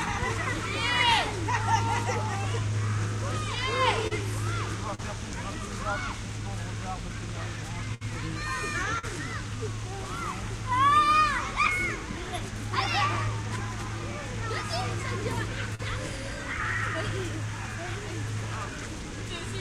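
A recording of everyday sounds carries brief smears and wobbles at 4.07–4.13 s, 4.95–5.01 s, 8.99–9.05 s and 15.75–15.81 s. Each is a short concealed packet loss: between 20 and 40 ms of audio never arrived in time, so the receiver stretched the preceding sound over a patch of roughly 33 to 43 ms and then blended back into the real signal. At 7.94–8.03 s a longer hold sags in level before the sound jumps ahead. This is a burst of packet loss: about 60 ms went missing together, and the receiver extended the last sound for about 60 ms while fading it down, so playback resumes past a short missing stretch.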